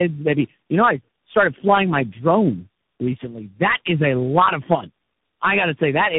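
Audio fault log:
throughout, tandem speech coding: the speech is rough, muffled and warbly, which fits about four speech coders in a row, such as AMR-NB, G.729A and CVSD, each re-coding the last one's damage. A spectrogram shows nothing above 3.8 kHz and smeared, blotchy harmonics.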